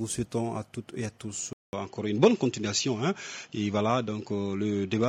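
At 1.53 s the sound drops out for about 200 ms, then comes back duller and boxier, and it stays that way to the end. Nothing above 7.6 kHz makes it through, so the top end is simply gone. The loudness barely changes, but a faint new background noise appears, roughly 55 dB down. That combination is most likely an input switched to a poorer device, with the system swapping to a narrower-band device mid-recording.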